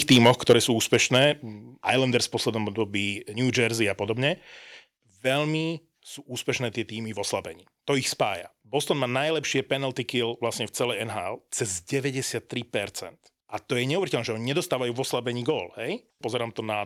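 Right at the start, from 0.1 to 0.57 s, there's microphone overload: the loudest syllables come out harsh and crackly, with the peaks flattened. The input level was likely set too high, so the signal tried to go about 6 dB past the converter's ceiling and a few percent of the samples got their tops sheared off. That squared-off waveform is what gives the gritty, buzzy edge.

At 0.53 s, just as that first distorted stretch ends, the level drops suddenly by about 4 dB, and both the speech and the background step down together. That's the microphone volume stepped down in a single jump, most likely by the call software reacting to the clipping it just saw and pulling the device's input gain back.

The cut wasn't quite enough, though. From 0.93 to 1.24 s the microphone overload returns in a milder form, pushing about 2 dB over, with only a small fraction of samples clipped. You hear a lighter crunch on the peaks rather than the heavy rasp from the opening, and the likely cause is the same: input gain still set a little too hot.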